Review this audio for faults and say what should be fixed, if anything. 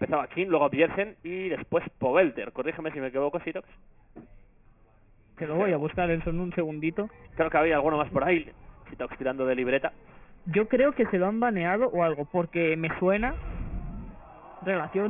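Aliasing runs through the whole clip. The audio appears to have been resampled to a much lower rate, which fits a drop from 48 kHz to 6 kHz, without a low-pass filter first. Everything above the new 3 kHz limit folded back down to unrelated frequencies, sitting roughly 15 dB below the wanted sound. The result is a gritty, metallic edge on bright sounds and a spectrum that runs hard up to the band edge. To prevent this, apply an anti-aliasing low-pass filter below the new half-rate before any downsampling.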